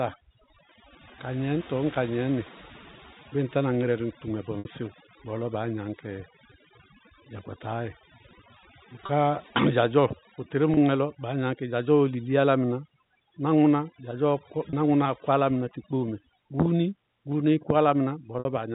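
Throughout, the background sits in near silence scattered with twinkling specks. This is overdone noise removal: a noise reduction stage set too hard pulls individual frequency bands down whenever they resemble its noise estimate, taking quieter parts of the speech along with them. The telephone band is cut off at 4 kHz by the G.711 A-law coding.

At 4.59 s comes a brief buzzy, held sound lasting about 60 ms, and shorter ones of about 30 ms follow at 9.06, 10.74 and 14.70 s, with another of about 60 ms at 18.39 s. These are packet loss with pitch repetition: the receiver filled each gap by repeating the last pitch cycle, which fits one lost packet for the shorter gaps and two for the longer ones.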